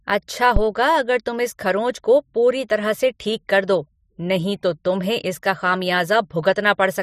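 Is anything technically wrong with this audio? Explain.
Yes. A phantom power thump appears at 0.56 to 0.64 s, just before "अगर तुम इस खरोंच". It happens when phantom power or another supply is switched on or off while the input is live, so the sudden voltage step passes through the input's coupling capacitors. Here that step comes through as a deep low-frequency thump that dies away quickly, with a decay of about 17 ms, before the speech that follows.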